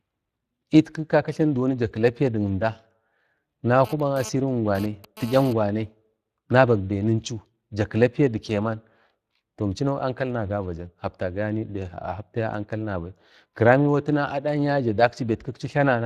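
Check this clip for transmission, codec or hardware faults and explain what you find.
Two faults are present: Speex codec damage across the whole clip, and a GSM phone buzz between 3.85 and 5.53 s.

Speex codec: Throughout, the speech sounds noisy and hoarse, with plainly audible coding damage. The CELP coder has too few bits to model the excitation, which fits a setting around 22 kbps. On a spectrogram, harmonics look smeared and grainy, with nothing above 15.3 kHz.

GSM phone buzz: From 3.85 to 5.53 s, a hard, raspy buzz sits about 15 dB below the speech and comes and goes. A nearby 2G phone transferring data sends radio bursts at 216.7 Hz, which the audio circuitry rectifies. A spectrogram shows a dense comb of 217 Hz harmonics, and the waveform shows regular spiky pulses.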